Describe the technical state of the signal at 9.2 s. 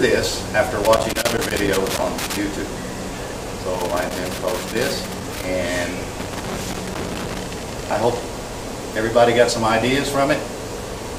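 At 9.2 s the signal is intact, with no dropout, distortion or other audible fault at that point.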